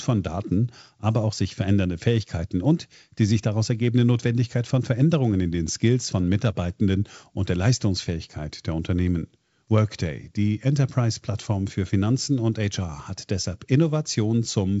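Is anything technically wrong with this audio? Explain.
No, nothing's wrong here; it's speech carried over G.722 wideband telephone coding at 56 kbit/s, so it stops at about 7.7 kHz and has the light coding texture you'd expect from that.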